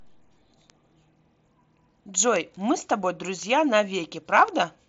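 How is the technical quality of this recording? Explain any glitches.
The recording has gone through a wideband Bluetooth headset link, most likely the mSBC codec, which leaves nothing above about 7.8 kHz and adds light graininess. On top of that there are four isolated clicks.

The bit error spikes fall at 0.70, 2.36, 3.43 and 4.48 s. Each is a single flipped bit in a digital sample, so the value leaps by a power of two for one to three samples and then snaps back. Each one is heard as a sharp, dry tick unrelated to the speech. On a waveform it appears as a lone vertical needle. On a spectrogram it shows as a thin full-height line.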